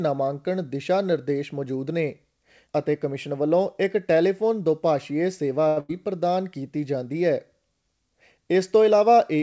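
A speech recording carried over a call path that passes nothing above 8 kHz, which fits a wideband codec such as G.722. Right after "ਇੱਕ ਟੈਲੀਫੋਨ ਦੋਭਾਸ਼ੀਏ ਸੇਵਾ" there is a short stall from a late packet, running from 5.68 to 5.92 s. A packet missed its playout time and the jitter buffer ran dry. The receiver held the last sound for about 84 ms until data arrived, then resumed at the same point. No speech is lost here, but the held segment shifts all later audio about 84 ms later and is heard as a slightly buzzy prolongation. Overlapping it, from 5.80 to 5.91 s, is a burst of packet loss. Consecutive packets never arrived in time, so the receiver extended the preceding sound for about 83 ms while fading it down, leaving a held, decaying buzz or hiss. When playback picks up again, about 80 ms of the original speech is missing, producing an audible skip within the stall.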